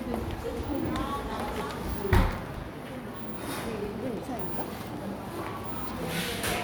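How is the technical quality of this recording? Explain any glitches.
The recording has two clear technical faults: a short crackle burst and a long run of regular ticks.

Processor overload crackle, from 2.15 to 2.64 s: the processor fell behind and missed about ten of its small buffers of a few milliseconds each. Each miss left a hard-edged silent gap, and together they produce a gritty, tearing crackle over the sound that stops once the load eases.

Periodic USB or driver dropouts, from 3.47 to 6.57 s: every 0.1 s something blocked the USB bus or audio driver, and roughly a millisecond of audio was lost and replaced by silence. The result is around thirty evenly spaced ticks, heard as a steady clicking rhythm on the signal.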